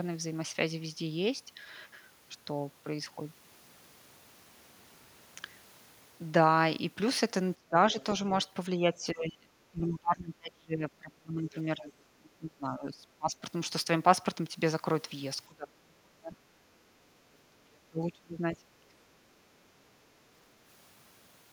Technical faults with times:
7.54-7.96 speech suppressed in double talk
7.91-8.04 other side's voice leaking through
8.77-13.45 speech suppressed in double talk
15.48-16.37 speech suppressed in double talk
16.65-16.80 background gated by the echo canceller
17.43-19.14 speech suppressed in double talk

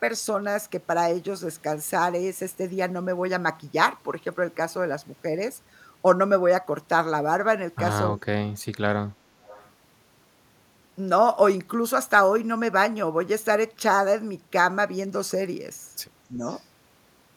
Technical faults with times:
8.08-8.85 speech suppressed in double talk
9.44-9.70 echo leak
16.37-16.41 speech suppressed in double talk
16.43-16.61 echo leak

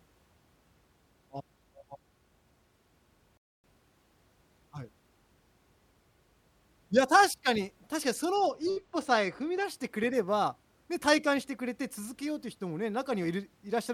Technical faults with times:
3.37-3.64 rebuffering stall
8.34-9.65 channel delay (comb filtering)

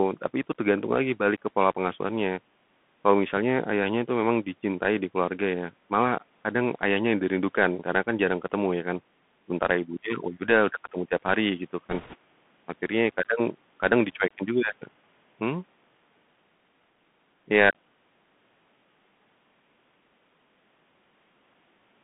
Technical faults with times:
0.00-22.03 Bluetooth CVSD headset codec
11.89-12.15 bit errors on a Bluetooth voice link

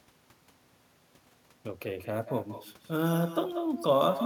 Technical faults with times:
0.00-4.25 echo with no canceller

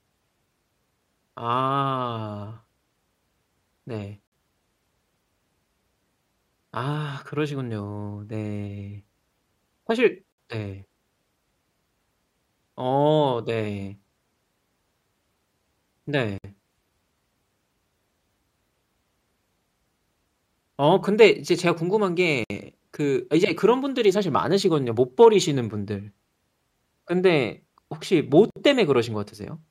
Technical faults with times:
4.27-4.32 gap at a join of encoded pieces
10.32-10.38 gap at a join of encoded pieces
16.38-16.44 gap at a join of encoded pieces
22.44-22.50 gap at a join of encoded pieces
28.50-28.56 gap at a join of encoded pieces

